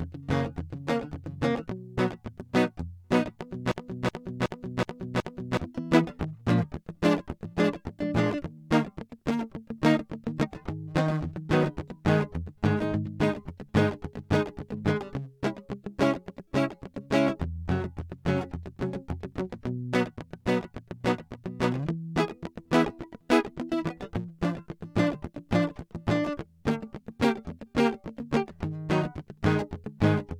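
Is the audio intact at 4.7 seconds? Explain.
No. A system hang loop runs from 3.72 to 5.57 s. The system froze while the hardware kept replaying one 0.37 s buffer, which fits a 16384-sample buffer. The music repeats five times at 2.69 Hz, a machine-gun stutter, losing about two seconds.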